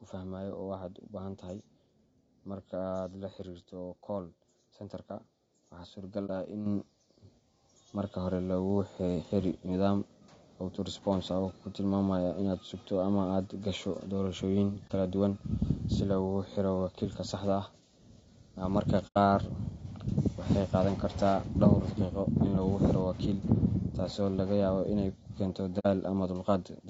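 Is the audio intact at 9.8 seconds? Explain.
No. At 9.8 seconds, as throughout the clip, the speech carries plainly audible low-delay AAC compression damage. It sounds rough and grainy, with noise filling the gaps between pitch harmonics and a thin, synthetic-sounding top band. The likely cause is AAC-ELD coding at a rate consistent with about 32 kbps. Its short frames resolve voice harmonics poorly, and the limited bit budget is spent unevenly, smearing the spectral detail.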